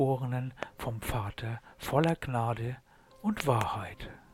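Three bursts of loud pops sit on top of the sound, which carries on underneath: one at 0.63–0.65 s, a double pop at 2.04–2.11 s and another pair across 3.40–3.63 s, each peaking around 20 dB above the signal. They are likely voltage spikes from a plug, switch or static rather than dropouts, since nothing is lost beneath them.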